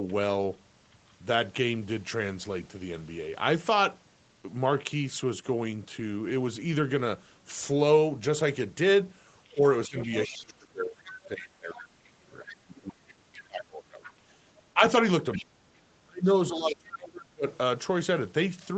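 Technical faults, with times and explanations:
9.52–11.78 s, 12.48–14.13 s, 15.32–15.38 s, 16.70–16.75 s and 17.51–17.57 s, other side's voice leaking through: the echo canceller likely failed to remove all of the far end that the talker's loudspeaker fed back into the microphone. A second voice rides under the talker, about 20 dB down in the two longer stretches and the brief scraps at 15.32 and 16.70 s. At 17.51 s it is fainter, about 35 dB down.
9.54–14.00 s, 14.74–14.81 s and 15.36–17.45 s, speech suppressed in double talk: with both sides talking at once, the canceller likely could not tell the near talker from the echo and turned everything down. In the first span roughly three seconds are affected, with drops reaching about 25 dB. The 70 ms dip at 14.74 s is about 10 dB. The last span loses around a second and a half, sinking by up to about 30 dB.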